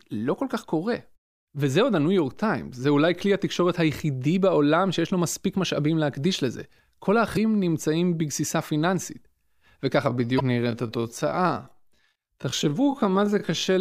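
Damaged data in a compressed stream shows up twice in this speech clip, from 7.33 to 7.37 s and again from 10.36 to 10.41 s, each a brief blip lasting under 50 ms. Bytes in the encoded stream were corrupted at those points, so the decoder misread the affected frames, lost its place, and had to hunt for the next valid frame header before resuming normal output. A time-stretched section runs from 10.04 s to the end: the pace suddenly drops to about 0.625 of normal while the pitch stays the same, and the slowed speech drags. This is likely the work of software lengthening the passage to fit a target duration, keeping the pitch by repeating short overlapping pieces of the waveform.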